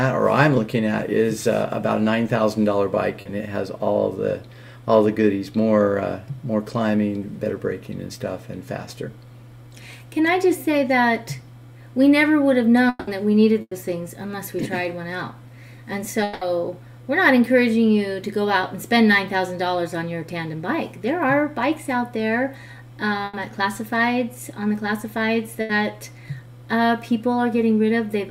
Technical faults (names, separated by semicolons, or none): short concealed packet loss; long network dropout; burst of packet loss